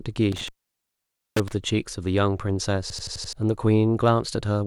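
From 0.32 to 1.53 s the speech drops out for about 0.88 s, with crackle at the start and end of the gap and faint hiss between. This is an intermittent contact: a loose plug or cable briefly opened the signal path.

Between 2.90 and 3.33 s an 85 ms fragment repeats exactly five times, giving a machine-gun stutter at 11.7 Hz. About 0.4 s of speech is lost. This is a system hang loop: the computer stalled while the audio hardware kept replaying its ring buffer, which fits a 4096-sample buffer.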